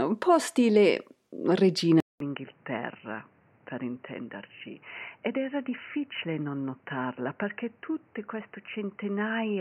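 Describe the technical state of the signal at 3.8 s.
At 3.8 s the sound comes from a poorer input device, likely after the system switched inputs. This lasts from 2.0 s to the end. A 200 ms silence marks the switch. Nothing passes above 3 kHz, so the sound is dull and boxy. It is about 10 dB quieter, over a new, faint noise floor.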